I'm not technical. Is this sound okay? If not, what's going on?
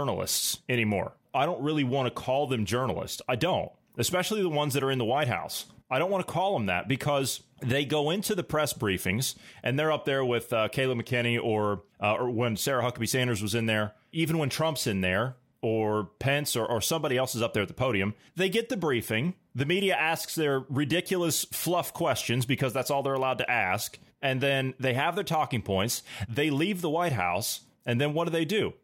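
Yes, nothing in this speech recording points to a technical problem. There is no moment in it that needs pointing out.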